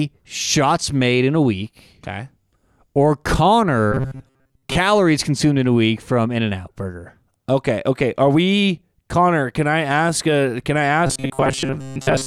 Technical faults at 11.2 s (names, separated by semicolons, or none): robotic sound from repeated short buffers